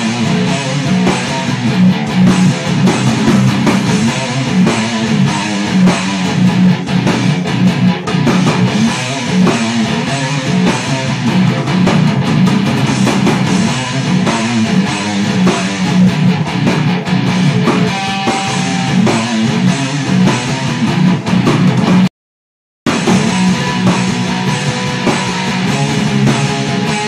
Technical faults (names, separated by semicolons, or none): hard clipping